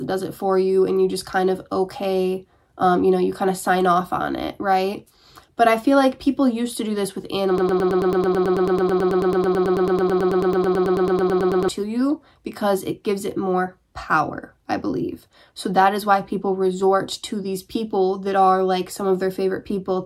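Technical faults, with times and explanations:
7.58 to 11.68 s, broken-record loop: the player, encoder or stream likely stalled and kept resending the last fragment it held. A 0.11 s piece repeats exactly, back to back, 38 times over about 4.1 s, and the audio meant for that stretch is lost.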